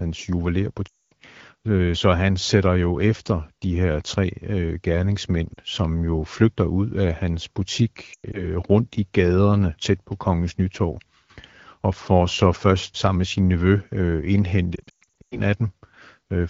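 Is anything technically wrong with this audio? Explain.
Yes. There are lost AMR speech frames at 0.87–1.13 s, at 5.54–5.58 s between "her tre øh gerningsmænd" and "som jo flygter ud", in scattered bursts at 8.13–8.48 s before "rundt i gaderne tæt", and at 14.75–15.39 s after "med sin nevø øh". Corrupted frames are replaced by repeating the last good pitch and vocal tract settings at falling gain. Short gaps sound like dips or warbles. The longer runs quickly drop to near silence, and the speech returns weak or rough.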